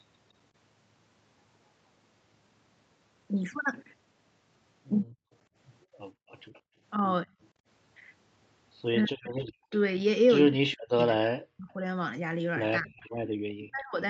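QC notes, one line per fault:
5.06–7.67 s, 9.66–9.71 s and 13.22–13.41 s, background gated by the echo canceller: the room tone beneath the speech dips sharply and then comes back. The first span has the largest effect, with brief holes adding up to around 0.7 s and a drop of about 36 dB. The later two are short dips of about 24 dB and about 30 dB. While the far-end loudspeaker was active, the echo canceller pulled the microphone down hard and released it once the playback stopped.
5.34–6.61 s, 9.04–11.04 s and 13.01–13.69 s, echo leak: a delayed duplicate of the speech trails the original. It sits 197 ms behind in the first span and 238 ms behind in the other two. It is quietest in the first span, at roughly 30 dB down. The 9.04–11.04 s span is the most noticeable, at roughly 15 dB below the speech, and the last span is roughly 25 dB down. This is likely residual loudspeaker pickup that the echo canceller did not fully subtract and that was sent back into the call.
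7.26–7.35 s and 8.99–14.02 s, speech suppressed in double talk: the talker's level sags. The first event is a short dip of roughly 20 dB. The second is a long stretch in which parts of the speech are pushed down by as much as about 40 dB, for roughly two seconds in total. The likely cause is that the echo canceller could not separate the near-end talker from loudspeaker echo while both sides were active, and so it attenuated both.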